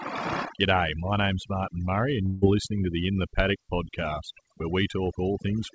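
A noise reduction stage set far too aggressively runs through the whole recording. This is overdone noise removal. It pushes individual frequency bands down whenever they sit near its noise estimate, so the background drops and breaks up into twinkling specks, and the speech, already band-limited to nothing above 8 kHz, loses its quieter parts along with the noise.

From 2.26 to 2.44 s, a long network dropout is the likely cause of what follows: about 0.16 s of audio never arrives. The receiver extends the last sound as a fading buzz or hiss across the whole gap, with no true silence. The speech then resumes with that stretch missing.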